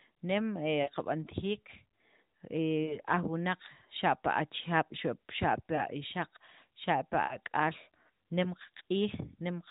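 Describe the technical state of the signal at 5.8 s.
A lost AMR speech frame falls at 5.76 to 5.81 s. The decoder briefly repeats the previous pitch and vocal tract settings at lower gain, causing a short dip or warble.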